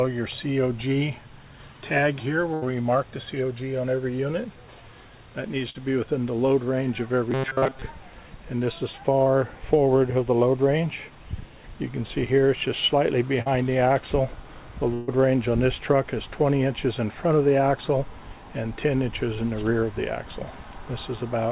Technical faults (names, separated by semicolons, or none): burst of packet loss; robotic sound from repeated short buffers; short concealed packet loss